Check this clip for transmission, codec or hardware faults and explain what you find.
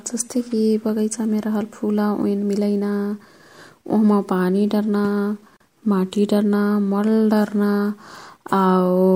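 One codec fault is present: a gap at a join of encoded pieces, from 5.57 to 5.60 s, just after "ओह्मा पानी डर्ना". The speech was evidently encoded in separate pieces, likely about 6 s long, and spliced without trimming, so the encoder's start-up delay and last-frame padding stay in. That leaves a silence of about 38 ms cutting into continuous speech, with smeared edges, before the speech resumes exactly where it stopped.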